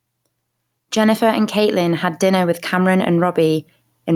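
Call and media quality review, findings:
Gain pumping, throughout the speech. Gain swing around 5 dB; dynamics squashed. Likely overdriven mic gain into fast limiter/compressor. Unlike a noise gate, gaps rise rather than cut to silence.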